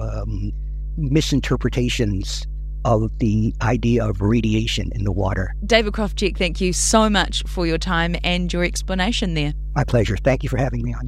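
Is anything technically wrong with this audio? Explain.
Yes. Mains hum runs through the whole clip: a steady 50 Hz tone with low harmonics, sitting only slightly below the speech level. Power-line current is leaking into the signal path, typically via a ground loop or a nearby transformer, producing a constant low drone under the speech.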